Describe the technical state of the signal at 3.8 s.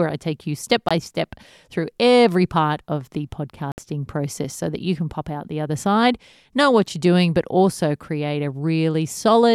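A Bluetooth dropout, likely from late wireless packets, silences the speech from 3.72 to 3.78 s, about 61 ms, showing as a full-band vertical gap.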